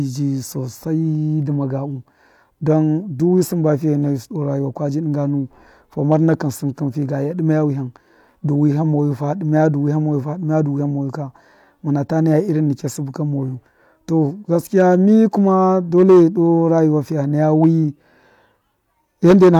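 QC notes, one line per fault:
6.12–6.33 s, 14.77–14.95 s, 15.48–15.53 s, 15.98–16.23 s, 17.63–17.67 s, 19.25–19.60 s: hard clipping. Speech peaks exceed the stage's ceiling by about 0 to 7 dB and are cut flat. This adds high harmonics that crackle.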